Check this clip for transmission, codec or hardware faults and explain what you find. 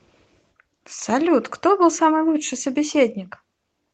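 The speech comes through a call path that is working normally, with its audio band stopping at 8 kHz in the way an Opus call codec at a moderate bitrate would leave it, and nothing in the signal points to a fault.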